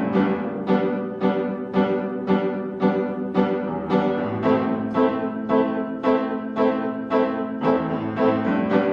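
No technical faults can be heard anywhere in the audio.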